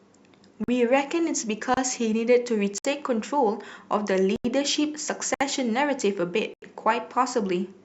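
The speech drops into blocks of digital silence at 0.64 s (about 43 ms), 1.74 s (30 ms), 2.78 s (64 ms), 4.36 s (85 ms), 5.34 s (64 ms) and 6.54 s (85 ms). Each gap starts and ends abruptly with no fade. The gaps are heard as short holes. The lengths fit whole audio buffers, such as 2048 and 4096 samples, that were likely not filled in time.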